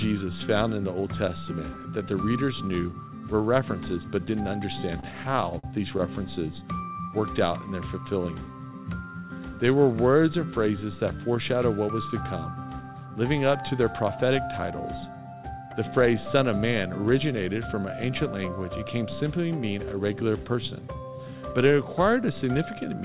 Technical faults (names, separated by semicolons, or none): repeated stalls (stutter)